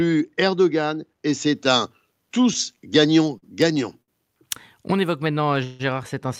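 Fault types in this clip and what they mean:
pre-emphasis left on: The treble boost applied before recording or transmission was never undone at playback, which fits a 50 µs FM curve. From 1.55 to 5.25 s the highs stand about 10 dB too strong at 10 kHz, so the speech sounds thin, bright and hissy.
short stall from a late packet: A packet arrived too late and the jitter buffer emptied, so the receiver held the last sound until the packet came. At 3.38 s a 46 ms stretch and at 4.02 s a 58 ms stretch leave sounds held too long. Nothing is lost.
call audio freeze: From 5.64 to 5.82 s the sound is held for 157 ms without ever going silent, then resumes where it stopped with nothing lost. This is likely packets held up in transit, with the jitter buffer running dry.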